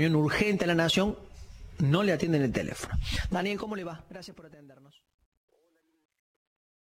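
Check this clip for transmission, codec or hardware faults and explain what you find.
One fault is present, on the fade-out at the end.

Truncation distortion on a fade runs from 3.21 s to the end at 6.99 s, worst from 4.46 s onward. The stage applying the fade keeps too few bits and adds no dither, which fits an 11-bit path. As the level drops toward the smallest step, the waveform collapses into a few coarse square steps. The fade, beginning around 3 s, turns gritty toward its quiet end.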